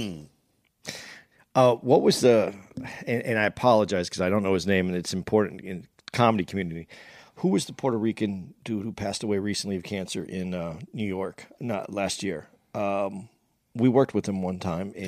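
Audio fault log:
No technical faults are audible in the speech, and the signal holds continuous timing throughout.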